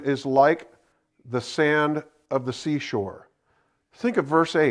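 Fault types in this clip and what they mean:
Nothing here to flag, since the speech comes through without any technical faults to list.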